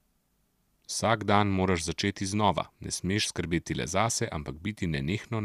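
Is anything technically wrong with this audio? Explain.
No, nothing is technically wrong with this audio.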